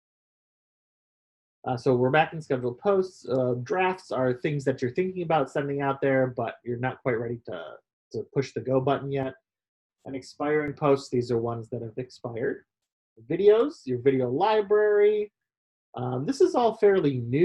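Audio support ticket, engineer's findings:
Channel delay (comb filtering), 9.23–10.68 s: hollow, phasey sound. One channel lagging around 10 ms before mono sum; evenly spaced notches from around 50 Hz.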